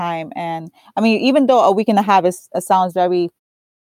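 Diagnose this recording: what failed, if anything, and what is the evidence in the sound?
Nothing has failed in this speech recording; all you hear near the end is a gentle fade-out, the kind an editor would add, easing away from about 3.4 s with no click or hard edge.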